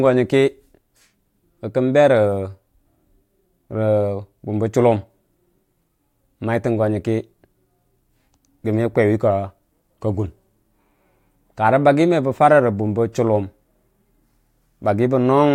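No technical faults can be heard anywhere in this speech recording.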